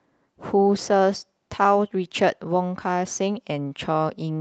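No technical faults are audible.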